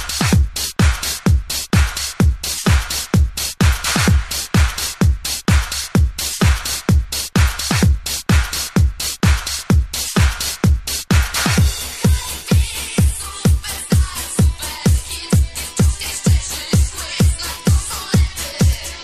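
No technical faults can be heard anywhere here.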